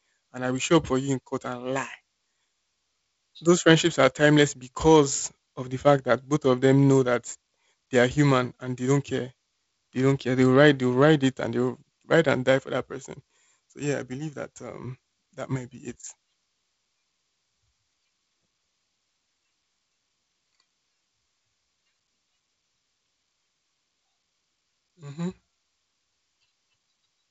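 No technical faults occur anywhere in the speech, so there is nothing to describe in time order.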